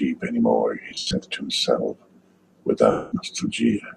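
At 0.89 to 1.13 s, then 2.91 to 3.12 s, the speech hits lost LE Audio frames. The decoder repeats the last spectrum with scrambled phase, so it turns to a hissy smear fading towards silence. The spectrogram shows blurred, fading bands, the first gap broken into runs up to about a tenth of a second. Both gaps step in 10 ms units, fitting the likely LC3 link.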